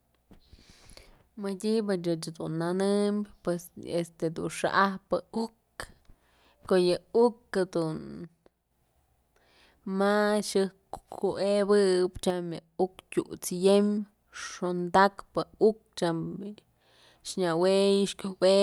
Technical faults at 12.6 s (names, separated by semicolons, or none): one channel drops out